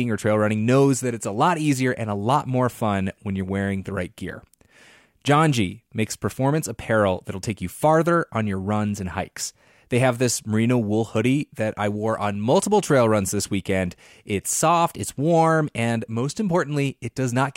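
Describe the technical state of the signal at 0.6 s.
The audio is intact at 0.6 s, with no technical fault audible at that point.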